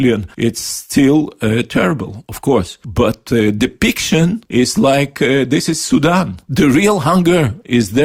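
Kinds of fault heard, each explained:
No kinds of fault are heard in this clip.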